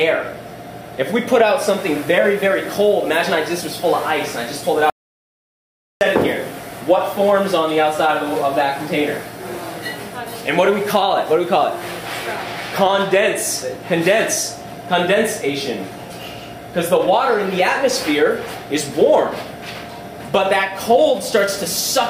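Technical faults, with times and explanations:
4.90 to 6.01 s, audio dropout to silence: the signal cuts out abruptly and leaves about 1.1 s of silence, with no room tone underneath, before resuming mid-flow. This is likely a lost input, with the recorder writing silence until it returns.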